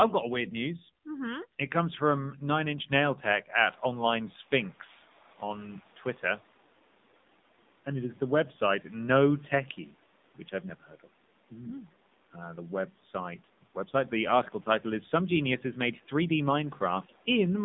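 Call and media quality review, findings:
AMR narrowband mobile codec, throughout. Buzzy, synthetic speech, nothing above 3.8 kHz. Band about 200 Hz to 3.7 kHz. Damage plainly audible, which fits the 7.4 kbps AMR-NB mode.

Noise suppressor catching up, 3.65 to 4.91 s. Room noise jumps just before, passes under-reduced, then sinks about 10 dB as the noise estimate adapts over 1.26 s.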